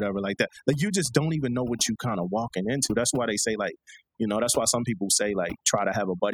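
A recording of speech in which, from start to finish, the background collapses into near silence dotted with twinkling, chirpy specks. That is overdone noise removal: a noise reducer set far too aggressively pulls individual frequency bands down or mutes them whenever they sit close to its noise estimate, so the quieter components of the voice are stripped away along with the noise.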